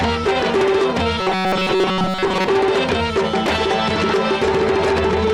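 Between 1.20 and 2.47 s, new audio likely arrived too seldom, so playback kept looping its last short buffer, roughly 5.3 ms long, across most of that span. This robotic sound from repeated short buffers lays a rigid, metallic 188 Hz buzz over the sound.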